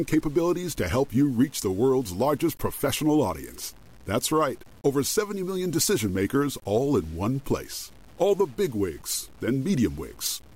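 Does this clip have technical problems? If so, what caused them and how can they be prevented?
Yes. Grainy distortion that tracks the signal runs throughout, and quiet tails sputter. This is likely low bit depth without dither, fitting about 7-bit truncation. Add dither before reducing bit depth.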